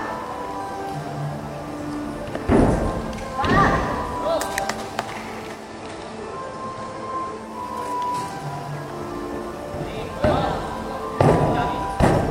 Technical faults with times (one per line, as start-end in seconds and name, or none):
5.51-7.60 digital radio blending to analogue